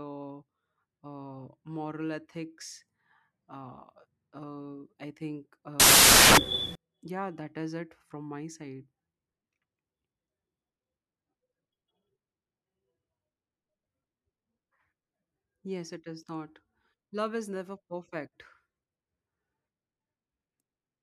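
From 5.80 to 6.75 s, samples built from the wrong bytes turn the speech into loud noise. The misaligned low bits dominate, so it is harsh and broadband, unlike steady hiss.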